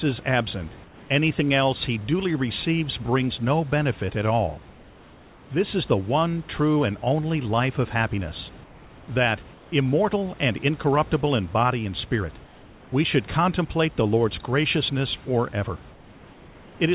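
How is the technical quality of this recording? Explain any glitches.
The recording has one recurring glitch: comfort noise in place of the background, heard in six pauses. Nothing is audible above 4 kHz, which fits narrowband G.711 coding on the call path. The room noise sits about 25 dB below the speech.

Comfort noise in place of the background occurs at 0.84–1.1 s, 4.7–5.5 s, 8.64–9.08 s, 9.54–9.72 s, 12.44–12.92 s and 15.92–16.8 s. In each pause the real room noise turns into a steady, featureless hiss about 2 to 3 dB quieter. The likely cause is that the sender stopped transmitting during silence and the receiver filled the gap with synthetic noise. On a spectrogram each gap shows as a smooth, uniform band. On the waveform the noise floor drops slightly.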